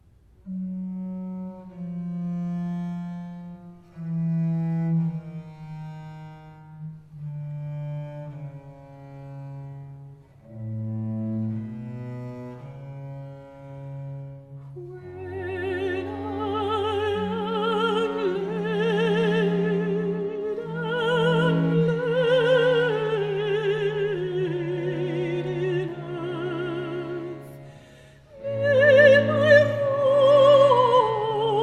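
No technical faults are audible.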